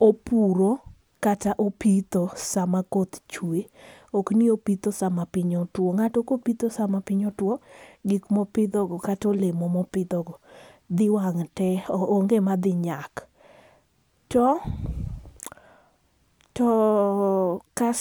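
A speech recording, with no technical faults to point to. Nothing heard in it needs a time, a cause or a correction.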